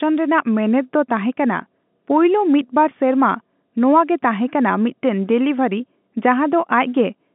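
No technical faults can be heard in this speech, which comes across as ordinary G.711 telephone audio with nothing above about 3.8 kHz.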